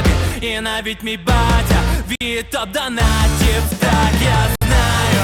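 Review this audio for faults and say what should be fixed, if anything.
Playback drops to silence at 2.15–2.21 s and 4.56–4.62 s, about 55 and 60 ms, then resumes. This is likely a Bluetooth stall: delayed packets emptied the receiver buffer. To prevent it, reduce radio interference or shorten the distance between devices.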